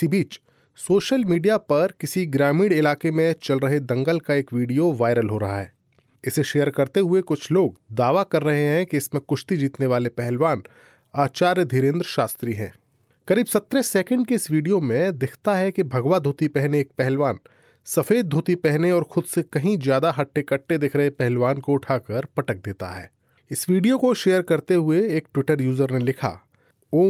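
Listening through the speech, nothing stood out as a technical fault at any point.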